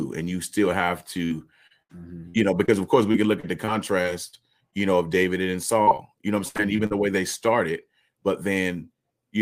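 From 1.25 to 4.74 s the speech breaks up with repeated packet loss (robotic sound). About a dozen short holes appear, the longest near 70 ms. Each hole is patched by stretching the last sound forward, so the voice turns choppy. A second stretch runs from 5.82 to 6.92 s. It has half a dozen holes, the longest near 63 ms. Concealment covers a larger share there, so the robotic effect is denser.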